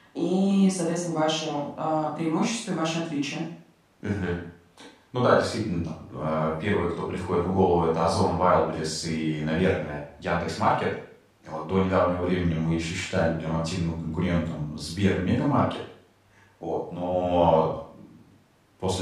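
No technical faults can be heard anywhere in the recording. Nothing in the audio stands out as a problem to place in time or describe.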